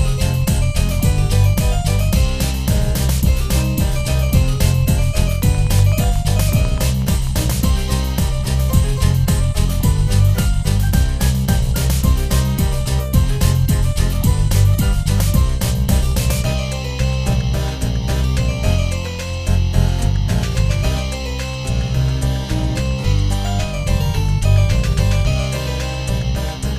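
From 5.42 s to 7.65 s a train of clicks runs over the sound: about twenty sharp ticks at a steady 8.1 per second, each peaking roughly as loud as the audio itself, so they stay audible through quiet moments. The likely cause is electrical interference or a faulty connection or power supply injecting a repeated pulse. On a waveform they show as evenly spaced narrow spikes, and on a spectrogram as a row of thin vertical lines spanning the frequency range.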